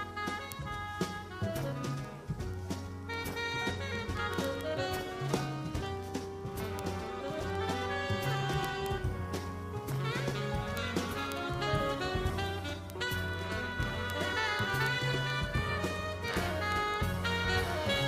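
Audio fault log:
0.14–18.03 s, word clock ticks: ticks about every 50 ms, each a single-sample slip from an unlocked clock roughly 400 ppm off. Too regular and brief for dropouts.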